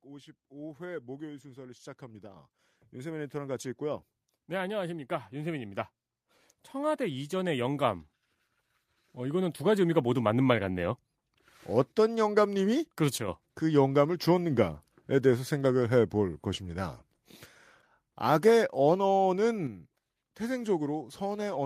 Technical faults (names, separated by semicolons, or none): automatic gain rising